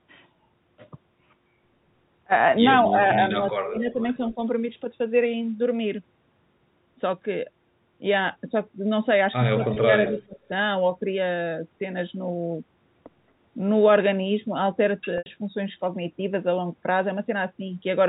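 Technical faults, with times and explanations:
2.9–2.99 s, 3.39–4.0 s, 4.35–4.39 s and 9.56–10.5 s, speech suppressed in double talk: the level dips by about 5, 30, 10 and 20 dB respectively, the 3.39 s stretch nearly cutting out. This is likely an echo canceller ducking the near talker while both sides speak.
3.79–4.34 s and 9.63–10.23 s, echo leak: a delayed copy of the talker trails by 216 ms and 220 ms. It is faint, about 35 dB down, in the first stretch and clearly audible, about 10 dB down, in the second, likely loudspeaker echo that the canceller left unremoved.
9.74–9.76 s and 15.18–15.26 s, packet loss with pitch repetition: the first 20 ms gap, fitting a single lost packet, sounds like a brief held buzz. The 80 ms gap, consistent with about four lost packets, holds, fades toward silence and cross-fades back as concealment repeats the last pitch period.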